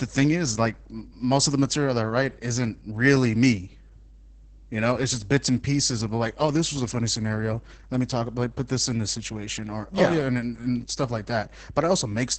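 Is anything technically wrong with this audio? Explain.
Yes, two faults run through the whole clip. The first is mains hum: a steady 50 Hz tone with low harmonics, about 15 dB below the speech, coupled in from the power line. Unlike rumble, it holds one fixed pitch. The second is Opus voice compression, heavily damaged. The speech sounds muffled, hoarse and slightly robotic, and nothing reaches above 8 kHz. The SILK predictive coder, at a rate that points to roughly 10 kbps, codes the excitation coarsely. This gives a rough hoarseness rather than MP3-style swirling.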